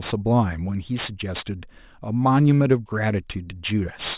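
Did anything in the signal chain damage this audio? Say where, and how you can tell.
Yes. Aliasing runs throughout, from a sample-rate conversion that dropped 24 kHz to 8 kHz without an anti-alias filter. Sibilants turn gritty and metallic as energy folds around 4 kHz into unrelated pitches, roughly 15 dB under the speech. A proper low-pass would merely dull them.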